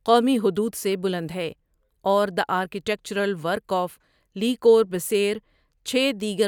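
No technical faults can be heard anywhere in this speech recording.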